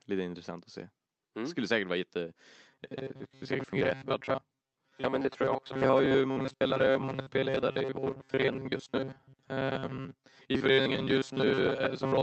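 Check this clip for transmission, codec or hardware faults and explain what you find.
Three faults are present in this speech clip, all after the words "skulle säkert vara jätte", over an Opus call path whose audio stops at about 8 kHz.

From 2.67 s to the end, the speech has the robotic sound of repeated short buffers. The likely cause is audio arriving too seldom, so that most of what plays is the last few milliseconds looped to fill the gap. The loop imposes a 134 Hz buzz, which fits a repeat of roughly 7.5 ms. The voice becomes a rigid, metallic drone that only loosely follows the speech. On a spectrogram this shows as flat, evenly spaced horizontal harmonics at multiples of 134 Hz. The waveform shows the same short shape repeating.

At 5.71 to 5.73 s, playback skips ahead. About a second of audio is dropped and nothing is inserted in its place, so the material on either side is butted directly together. 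This cuts the delay by about a second. It is heard as an abrupt jump with a discontinuity in the sound. The waveform shows a hard splice with no silent gap, and the spectrogram shows a sudden vertical change in content.

From 5.87 to 6.85 s, jitter buffer speed-up follows the skip as the receiver trims excess delay. Short pitch-period pieces totalling about a tenth of a second are cut out repeatedly, so the speech runs at 109% speed with its pitch unchanged and sounds hurried. On a spectrogram, syllables and formant movements look compressed in time while the harmonic spacing stays the same. The waveform shows whole pitch periods removed.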